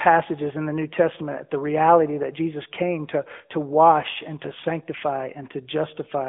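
Speech runs through an AMR narrowband mobile codec from start to finish, with the plainly audible buzzy, synthetic edge of a vocal-tract model rebuilding the voice from sparse pulses, which fits a mid-rate AMR-NB mode near 10.2 kbps. The line band spans about 150 Hz to 3.5 kHz. A spectrogram would show a flat ceiling with nothing above 3.7 kHz and thin energy below 150 Hz.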